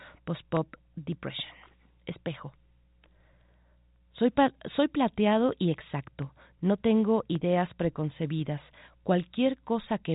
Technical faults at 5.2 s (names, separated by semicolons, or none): none